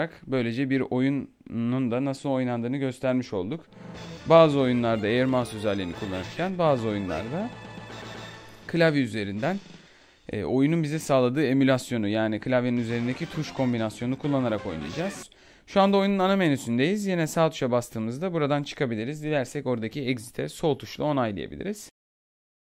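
Nothing in this recording stands out as a technical fault, so there's nothing here to flag.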